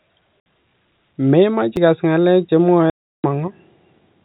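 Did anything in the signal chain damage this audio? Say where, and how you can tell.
Yes. At the network stage there is packet loss filled with silence: two hard-edged holes, 60 ms at 0.40 to 0.46 s and 340 ms at 2.90 to 3.24 s, the second right after "ikas ngalek che". Both lengths are whole multiples of 20 ms, which fits 20 ms packets. The receiver inserted digital silence for the missing packets, so each gap has hard edges.

At the playback stage there is a CD skip at 1.76 s, just before "ikas ngalek che". It shows up as a tick and a very brief mute, after which the audio resumes from a different point. The laser jumped off its track onto another turn of the disc's spiral, and the player briefly muted while it relocked. The 4 kHz band limit of the G.711 telephone path, which carries the clip, is normal and is not part of either fault.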